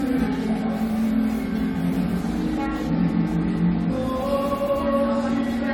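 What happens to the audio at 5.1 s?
At 5.1 s, as across the whole clip, the sound carries generation loss: smeared, swirly, hollow texture with blurred attacks. It likely comes from repeated lossy re-encoding, about three times, consistent with 96 kbit/s AAC-LC. A spectrogram shows nothing above 18.6 kHz.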